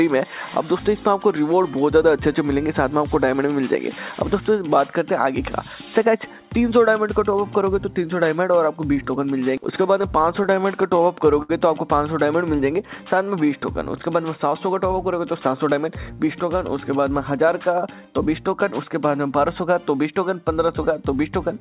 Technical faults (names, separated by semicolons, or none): scattered short gaps; short stall from a late packet; jitter buffer slow-down; jitter buffer speed-up